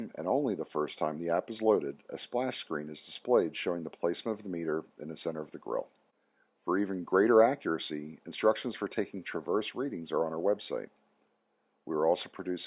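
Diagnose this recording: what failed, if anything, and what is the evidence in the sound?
Nothing in the signal chain appears to have failed: the audio holds steady levels and continuous timing throughout, with no audible disturbance pointing to the wiring, converter, buffering, processing, transmission, storage or playback stages.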